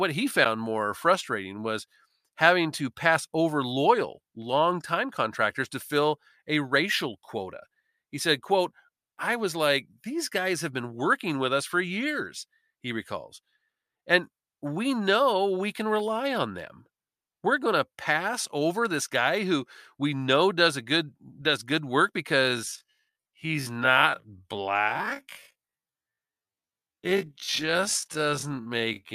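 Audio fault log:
0.44 s, corrupt frame decoded. A short burst of misplaced energy cuts into the speech. A couple of damaged compressed frames were decoded anyway. Their garbled gains and codes put sound at wrong frequencies for that instant.
22.35 to 29.15 s, time-stretched section. The speech abruptly slows to half pace while its pitch holds steady, and it drags to the end. Stretching software likely filled the extra length by repeating short slices of audio.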